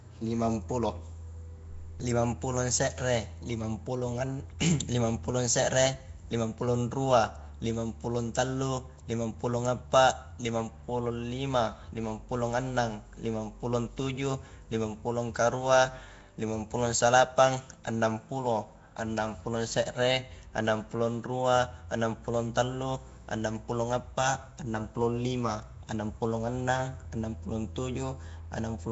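Speech, and it's got a rough, hissy halo around it for the whole clip, plus that smeared, underwater feel, with nothing above about 7.7 kHz. That's most likely Nellymoser compression, the old Flash mic codec: it chops the signal into short blocks at a fixed, meagre bit budget, so quiet bands get no bits and are filled in with noise. The damage is plainly audible and fits a low bitrate around 32 kbps.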